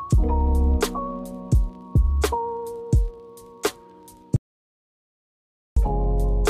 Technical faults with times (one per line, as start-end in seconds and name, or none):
4.36-5.77 audio dropout to silence